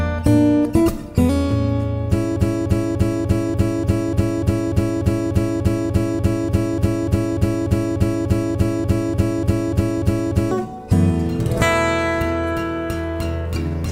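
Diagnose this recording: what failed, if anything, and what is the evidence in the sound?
A broken-record loop runs from 2.36 s to 10.51 s. One 295 ms fragment repeats exactly, back to back, 28 times. The audio due in that span never arrives. The likely cause is a stalled player or stream buffer resending its last fragment.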